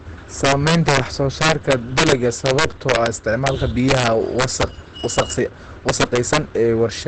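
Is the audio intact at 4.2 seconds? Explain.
No. From 3.89 to 4.63 s there is an integer overflow: loud peaks were driven about 4 dB past the largest value the integer format can hold, and instead of being limited they wrapped to the opposite sign. Each peak flips across the full range, producing violent cracks far harsher than ordinary clipping.

The speech at that moment also sounds muffled and hoarse, with nothing above 8.6 kHz. The likely cause is heavy Opus compression in its SILK speech mode, which fits a very low bitrate of around 12 kbps and squeezes the signal into a narrowed wideband range.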